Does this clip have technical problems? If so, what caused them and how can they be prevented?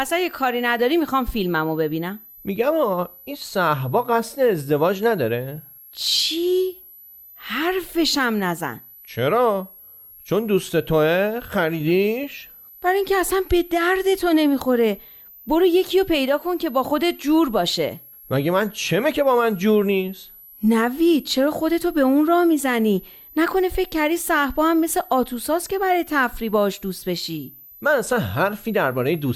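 Yes: a switching supply whistle runs throughout the speech, a high tone drifting between about 11.4 and 12.4 kHz, roughly 25 dB below the speech. The wandering pitch, unlike a fixed tone, reveals a power supply changing burst rate with load. Prevent it with linear or well-filtered supplies.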